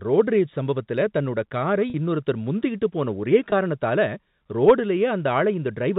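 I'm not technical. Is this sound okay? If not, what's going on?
No. There is packet loss with pitch repetition, twice: from 1.90 to 1.94 s, and from 3.50 to 3.52 s. Small chunks of the speech never arrived, about 40 ms the first time (which fits two lost packets) and 20 ms the second (one packet). To cover each gap, the receiving end replayed the last tiny cycle of the voice, so you hear a brief, slightly buzzy hold in the speech. The call is carried as ordinary telephone-quality audio.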